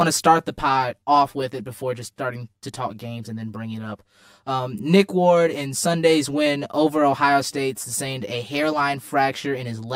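From start to finish the speech sounds hollow and phasey, as if heard through a tube, with a fixed, slightly metallic colouring that never moves. That is channel delay (comb filtering): one channel arrives around 10 ms behind the other, and when the two are summed to mono, the shared content cancels at evenly spaced frequencies. The first notch sits near 50 Hz, with further dips roughly every 100 Hz above it, thinning the sound throughout.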